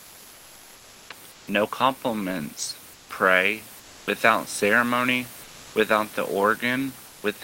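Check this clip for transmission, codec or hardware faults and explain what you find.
One fault appears, comfort noise in place of the background, in six pauses: 0.0–1.09 s, 1.31–1.47 s, 2.93–3.09 s, 3.79–4.07 s, 5.43–5.75 s and 7.07–7.23 s. When speech stops, the real room noise gives way to a flat, featureless hiss, about 2 to 4 dB quieter. The likely cause is Opus discontinuous transmission. The sender goes silent between speech, and the receiver fills the gap with synthetic noise.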